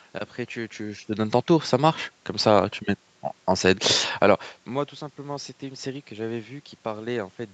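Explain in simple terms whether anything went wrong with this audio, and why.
Nothing went wrong here; the bits where the speech gets quieter or louder, around half a second in and again near 4 s, are just the talker shifting toward or away from the microphone, and the background noise is simply the room itself.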